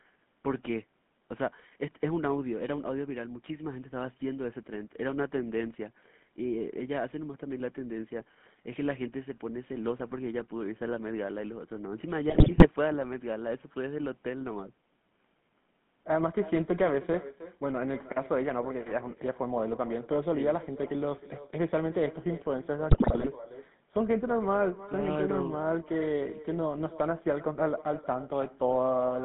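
From the start, every phrase has a quieter copy trailing it by about a third of a second. That is echo with no canceller. The far end's loudspeaker feeds its microphone, and nothing strips that path out. The copy sits about 16 dB below the speech and sounds thin.

The whole clip also carries GSM full-rate codec damage, and plainly so. The line band runs from 150 Hz to 3.5 kHz. Nothing brighter survives. The pulse-driven excitation leaves the speech buzzy and gravelly, which fits the 13 kbps full-rate coder.

From 12.28 to 12.67 s, GSM bit errors break through. Corrupted filter, pitch and gain values reach the decoder. The speech turns to squawks, pops and gargling across roughly 17 frames. The same happens from 22.90 to 23.28 s, over about 18 frames.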